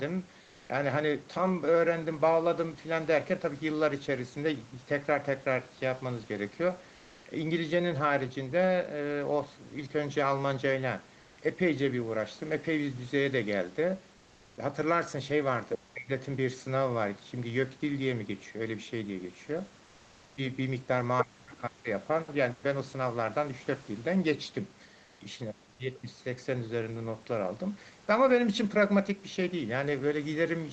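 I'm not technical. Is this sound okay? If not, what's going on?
No. Three things go wrong in this speech.

Comfort noise in place of the background: during pauses, the sending side likely stopped transmitting, and the receiver filled the gap with made-up hiss. At 0.43–0.67, 14.19–14.55, 19.87–20.35 and 25.07–25.19 seconds, the real room sound is swapped for a flat, featureless noise.

Other side's voice leaking through: the echo canceller likely failed to remove the far person's voice coming out of the loudspeaker. At 15.74–15.78 seconds, a brief scrap of that second voice slips in, fairly loud next to the talker.

Speech suppressed in double talk: both people spoke at once, and the echo canceller likely couldn't tell them apart, so it turned everything down. From 15.75 to 16.11 and from 21.22 to 21.89 seconds, the talker's voice sinks sharply or drops out in pieces.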